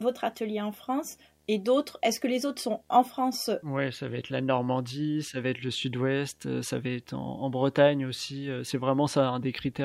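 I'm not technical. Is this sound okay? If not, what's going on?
No. A low, steady video or display buzz runs under the speech from start to finish. A screen or its video cable is leaking into the audio wiring, adding a hum at the picture's 75 Hz refresh rate with faint hiss above it, kept quiet but constant.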